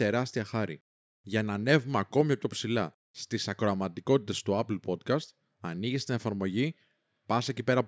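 No technical faults can be heard anywhere in the speech recording, so there is nothing to timestamp.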